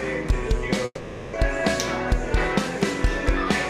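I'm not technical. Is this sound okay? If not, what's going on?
No. From 0.85 to 1.36 s the sound turns into a fading buzz, goes briefly silent, then resumes with a piece missing, likely a long network dropout.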